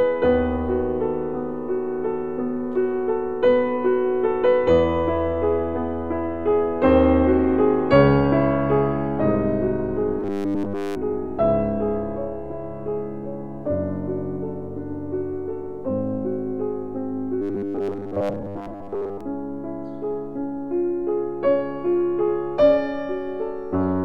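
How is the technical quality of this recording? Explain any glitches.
Two stretches show robotic sound from repeated short buffers, from 10.20 to 10.97 s and from 17.42 to 19.21 s. Audio likely arrived too seldom, so playback looped a segment of about 10 ms, fitting the 100 Hz buzz. The first stretch is repeated throughout, and the second mostly so, giving a rigid, metallic drone.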